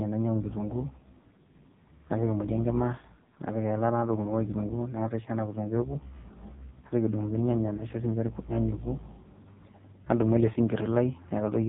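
From start to end, the speech carries AMR narrowband mobile codec damage, and it is heavy. Nothing above about 3.8 kHz survives. The voice sounds buzzy and synthetic, which points to a very low AMR-NB mode, around 5.15 kbps, with too few pulses to model it.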